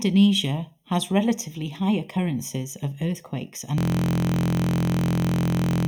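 Channel delay (comb filtering) runs throughout. One channel lags by roughly 0.3 ms before the mono sum, notching near 1.5 kHz and above. The speech sounds hollow.

At 3.78 s, after "high occurrences of earthquakes", a system hang loop starts. A 23.22 ms piece repeats to the end, which fits a 1024-sample buffer. It buzzes at 43.1 Hz.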